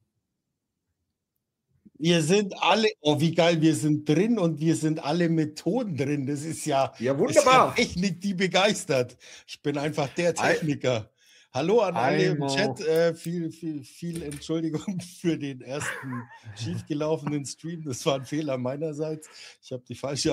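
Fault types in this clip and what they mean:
No faults detected across the clip; nothing to list.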